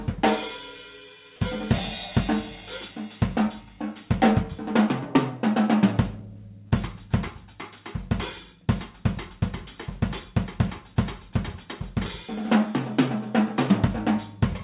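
Short concealed packet loss at 6.68 to 6.73 s: about 40 ms of audio arrived too late, so the receiver stretched the preceding sound across the gap, leaving a brief smeared blip.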